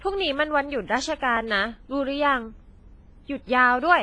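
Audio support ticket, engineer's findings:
Speech, throughout: ringing, washy smear, hiss breathing with the signal, nothing above 10.5 kHz. Likely WMA compression; heavy damage fits about 24 kbps. Long transform blocks spread quantisation noise over tens of ms and zero weak lines. A plain low-pass wouldn't breathe.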